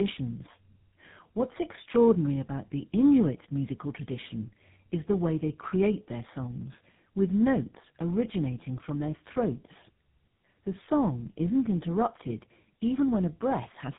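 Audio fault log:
Throughout, tandem speech coding: the speech passed through two speech codecs in a row. Its texture suggests a low-rate AMR-NB stage, then a G.711 link, then GSM full rate. At each border the audio was decoded and coded again, so every coder modelled the previous one's errors as if they were speech. That stacking makes it rougher, noisier, more muffled and warbly than either codec alone. Nothing is heard above 3.8 kHz.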